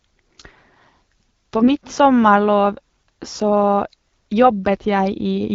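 From 1.60 to 1.75 s, just before "sommarlov så", the AMR wideband stream takes AMR bit errors: around 7 percent of the weakly protected bits in a short run of frames, five 20 ms frames, arrive flipped while the checksum on the core bits still passes. The decoder places excitation pulses wrongly and misreads fine pitch, gain and spectral values, so the speech keeps its rough pitch and level but turns briefly hoarse, scratchy and gargly.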